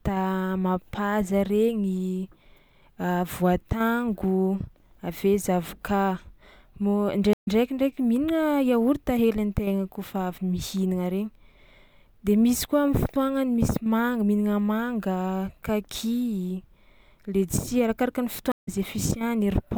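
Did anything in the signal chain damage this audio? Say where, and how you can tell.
Yes, there are two stream reconnects, a network-stage fault. At 7.33 s the speech drops out for about 120 ms and picks up roughly 70 ms further along, and at 18.52 s there's a 140 ms gap that resumes roughly 150 ms ahead. Each time the connection broke, the player went quiet, re-established the stream and spun up a fresh decoder mid-stream, so the restart comes in muted or faded and the bit in between is simply lost.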